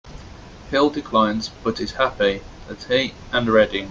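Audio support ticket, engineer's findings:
Engineer's findings: no fault found in the speech audio.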